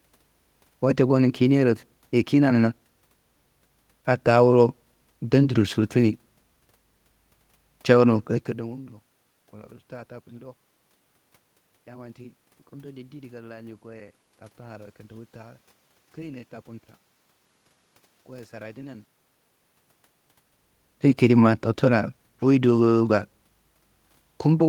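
No technical faults are audible.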